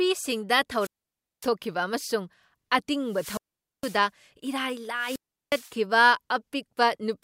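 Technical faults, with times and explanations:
0.78–1.49 s, 3.06–4.06 s and 4.95–5.74 s: wireless microphone squelch dropout. The FM radio link fades, hiss swells, then the receiver's squelch mutes the output for about 0.56, 0.46 and 0.36 s. Spectrograms show a brief broadband noise wash and then blank columns, and the waveform collapses to flat line.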